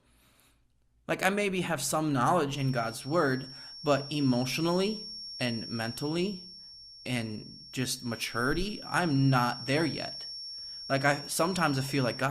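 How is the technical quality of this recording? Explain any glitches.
A feedback whistle runs through most of the recording. From 2.46 s to the end at 12.30 s, a thin, steady tone near 5.5 kHz sits behind the speech, about 15 dB below it, swelling and fading slowly in level. A loudspeaker-to-microphone loop held just short of runaway is the likely cause.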